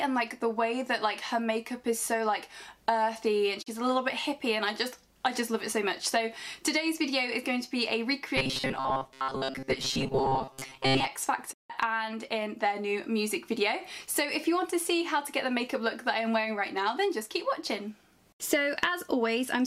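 At 3.61 s the receiver briefly loses valid data, which fits a single frame failing its check, and a digital broadcast dropout follows. The output fades out over about 20 ms and stays muted until good frames resume at 3.68 s, so about 32 ms of the programme is simply gone. It is heard as a tiny, clean hole rather than a click.

From 8.37 s to 11.08 s, robotic sound from repeated short buffers sets in, likely because new audio reaches the player too slowly and it keeps replaying its most recent fragment instead of the real material. The buzz sits at 133 Hz, which fits a loop of roughly 7.5 ms. For most of this stretch the sound is a rigid, metallic drone at that fixed pitch that only loosely follows the underlying contours.

A second digital broadcast dropout runs from 11.52 s to 11.72 s. It fits five consecutive frames going bad, and after another 20 ms fade about 160 ms of audio is lost, long enough to register as a distinct gap before the sound returns.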